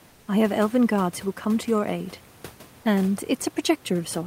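From 0.08 to 0.27 s, just before "I have elven guards", the room noise gives way to comfort noise in place of the background: a smooth, featureless hiss about 2 dB quieter, likely synthesised by the receiver during discontinuous transmission. Unlike a gate or dropout, it never falls silent.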